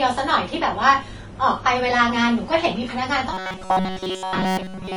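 Transcoding between lossy codecs runs throughout: mixed smeared artefacts suggest a low-bitrate Vorbis encode likely re-encoded to WMA. Robotic sound from repeated short buffers begins at 3.33 s and lasts to the end, a metallic 188 Hz buzz. It is likely caused by repeating roughly 5.3 ms chunks in place of most of the audio.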